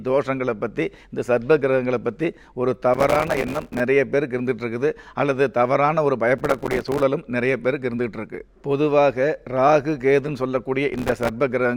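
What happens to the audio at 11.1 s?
At 11.1 s the sound is inside a burst of processor overload crackle running from about 10.94 to 11.29 s. The processor keeps missing the deadline for its small buffers, each only a few milliseconds long, and every missed one is dropped as silence. Dozens of these hard-edged gaps in a row give a gritty, tearing crackle. On a waveform the signal is chopped by many short flat dropouts; a spectrogram shows dense vertical broadband streaks across that span.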